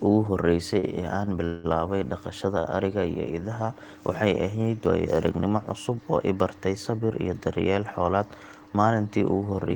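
Three times in the first three seconds of this speech recording, a packet arrived late and the jitter buffer ran dry, producing a short stall from a late packet at 0.79–0.86 s, 1.25–1.30 s and 2.60–2.68 s. The receiver held the last sound for 33, 20 and 49 ms respectively until the packet turned up, then carried on from the same point, so nothing is lost but a sound drags briefly with a faint buzz or dip. Between 1.45 and 1.67 s there is a call audio freeze, likely caused by packets held up in transit emptying the buffer for longer. The last sound is drawn out as a fading buzz or hiss for about 190 ms without dropping to silence, then the speech resumes where it stopped. A gap has been inserted, and nothing is missing.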